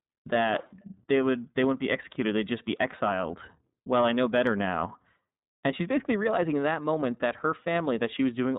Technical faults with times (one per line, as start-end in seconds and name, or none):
0.00-8.58 iLBC codec